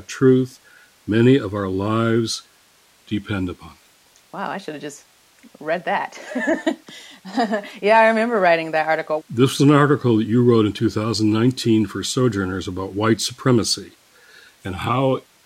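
Nothing is technically wrong with this speech recording, and no fault can be heard anywhere in it.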